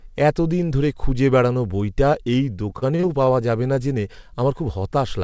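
Between 2.70 and 3.32 s the speech turns choppy, with a stuttering texture and small pieces missing. This is repeated packet loss: the sound suggests about five short dropouts, the longest around 30 ms, each patched by stretching the preceding audio. Roughly a fifth of that stretch is concealed sound rather than real signal. The speech rolls off sharply above 8 kHz, which fits a G.722 call codec.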